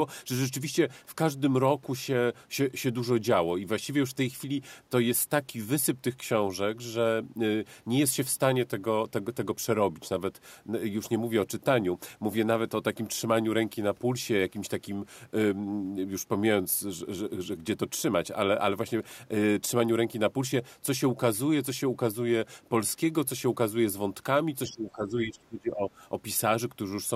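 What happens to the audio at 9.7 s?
Nothing goes wrong at 9.7 s: the speech carries on intact there, with no dropout, click, distortion or other audible fault.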